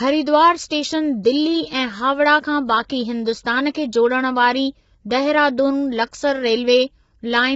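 Throughout the speech, low-delay AAC compression, likely AAC-ELD, codes the audio in very short frames that resolve pitch harmonics poorly. The heavy damage fits a rate near 16 kbps. Voices turn rough and grainy, with noise between harmonics and nothing above 7.7 kHz.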